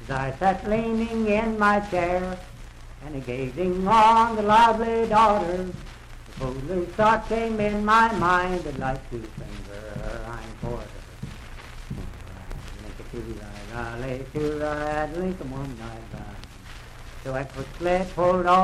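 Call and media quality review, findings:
Gain stage or converter overdriven by about 4 dB, peaks cut flat: hard clipping at 3.91–4.71 s, 5.13–5.32 s, 7.01–7.14 s and 17.91–18.63 s, the last running to the end. Probable component: input gain or level stage ahead of the converter. The flattened tops add high-order harmonics, heard as crackle on peaks. Fix: reduce upstream gain or add limiter headroom.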